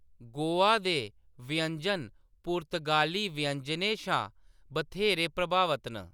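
Speech recording with no audible technical faults.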